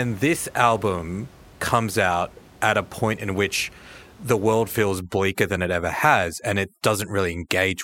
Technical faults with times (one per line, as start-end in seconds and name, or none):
5.01-7.83 overdone noise removal